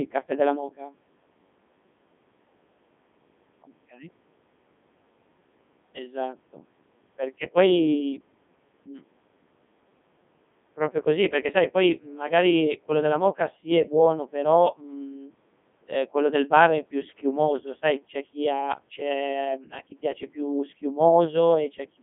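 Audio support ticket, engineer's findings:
Codec 2 vocoder throughout: robotic, buzzy speech rebuilt from sine waves; waveform not preserved. Band roughly 150 Hz to 3.6 kHz, nothing above 3.8 kHz. Heavy damage fits 3.2 kbit/s mode. Synthetic buzz, not a filtered phone line's natural timbre.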